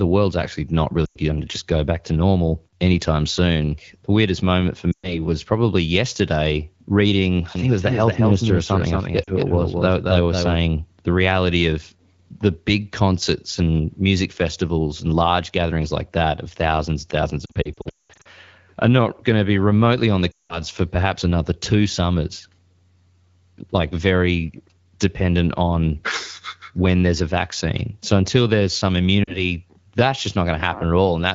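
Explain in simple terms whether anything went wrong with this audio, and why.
Several times the speech briefly warbles, stretches out or drops away: at 1.05 to 1.18 s, 4.92 to 5.26 s, 9.24 to 9.32 s, 17.46 to 18.27 s (a choppy patch with gaps up to 0.2 s), 20.31 to 20.60 s and 29.23 to 29.43 s. These are lost AMR speech frames. Radio errors corrupted pieces of the call, so the phone filled the gaps by repeating the last good sound while fading it down.

From 7.55 to 10.55 s a second, somewhat quieter copy of the speech trails about 0.2 s behind, like a crisp echo with no room sound, and it starts and stops abruptly. This is a doubled audio track, likely caused by the same audio being captured twice along a slower path.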